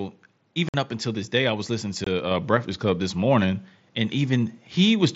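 Just before "up until this day", at 0.69 to 0.74 s, there's a gap of about 52 ms from unconcealed Bluetooth headset packet loss. Audio packets between headset and phone went missing and nothing filled in, so the sound just drops out with hard edges. A shorter hole of about 23 ms follows at 2.04 to 2.07 s, right after "day I was listening". Both are sudden cuts through the mSBC wideband audio.

At 2.31 s there's a microphone volume step up of about 5 dB. The call software judged the input too quiet and raised the mic gain in one jump, so the voice and the background both get louder together.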